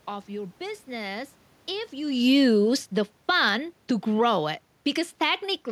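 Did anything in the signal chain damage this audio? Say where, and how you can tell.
Yes. Automatic gain falling in the call processing stage: after "of your business if", from 1.95 to 3.49 s, the gain eases down by about 6 dB before "to grow it". The room noise drops along with the speech, so the waveform envelope and spectrogram dim together.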